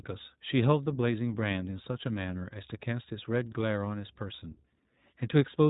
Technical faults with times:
0.00-5.69 iLBC codec

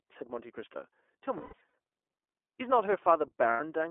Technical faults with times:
0.00-3.91 iLBC codec
1.37-1.74 lost iLBC frames
3.51-3.61 lost iLBC frames

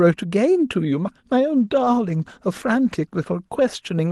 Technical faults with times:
1.59-3.31 call bitrate drop

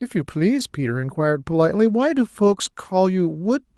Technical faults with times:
2.43-2.53 lost packet rebuilt from error correction

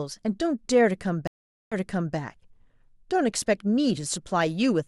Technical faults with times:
1.27-2.15 stream reconnect

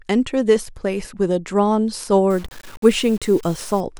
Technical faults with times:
2.30-3.80 low bit depth without dither

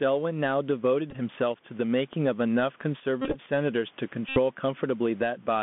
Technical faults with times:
0.00-5.62 gain pumping
0.00-5.62 Bluetooth CVSD headset codec
1.11-1.16 Bluetooth headset packet repeated
3.22-3.39 Bluetooth headset packet repeated
4.29-4.38 Bluetooth headset packet repeated

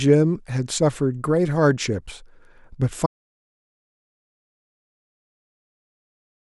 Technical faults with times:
3.06-6.42 audio dropout to silence

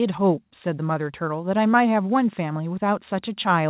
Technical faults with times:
none

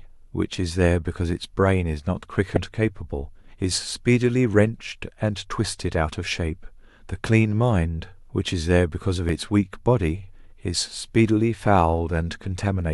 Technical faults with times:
2.54-2.57 damaged data in a compressed stream

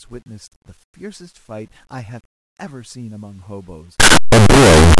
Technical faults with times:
4.00-4.99 signed and unsigned mixed up

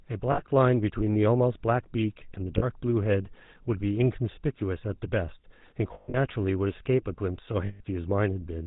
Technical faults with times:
0.00-8.66 GSM full-rate codec
0.32-0.41 lost GSM frames
2.58-2.64 lost GSM frames
5.94-6.17 lost GSM frames
7.66-7.81 lost GSM frames

